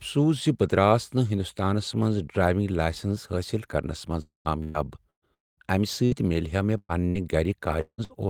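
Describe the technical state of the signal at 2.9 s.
The speech signal at 2.9 s is intact, with no audible dropout, distortion or other technical fault at that moment.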